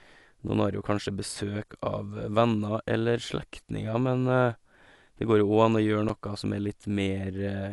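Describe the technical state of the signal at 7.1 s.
At 7.1 s the speech carries the same damage heard throughout the clip, likely Dolby Digital compression. Nothing sounds above 11.4 kHz, so the voice is dull and lacks air, and the codec damage is plainly audible as rough, fluttering noise around the voiced tones. That points to a low bitrate, near 64 kbps: the encoder narrows the band and leaves many frequency lines without mantissa bits, so the decoder fills those gaps with noise.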